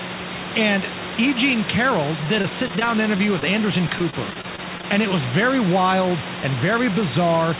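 Repeated packet loss (robotic sound) hits the speech from 2.24 to 3.50 s and again from 3.88 to 4.85 s: audio packets keep going missing, each hole, up to about 24 ms, is patched by stretching the previous sound, making the speech choppy.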